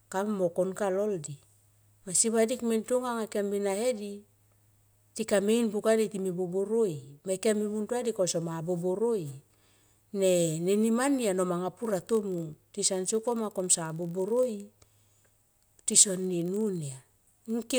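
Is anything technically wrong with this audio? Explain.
Yes. From 11.81 s to the end of the speech, there is a block size mismatch (padded). One stage delivers blocks slightly shorter than the next stage reads, so each block is topped up with zeros. Those tiny silent gaps recur at 46.9 Hz, producing a steady low buzz, which fits a 1024-sample read block at 48 kHz. Timing stretches only marginally, to 0.999 of normal speed. That fixed rate distinguishes it from random buffer underruns or a sample-rate mismatch.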